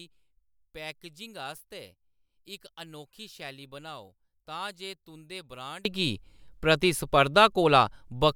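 One channel inverted, 0.0 to 5.85 s, in this speech clip: the level falls about 21 dB, likely from reversed polarity cancelling the shared centre in mono.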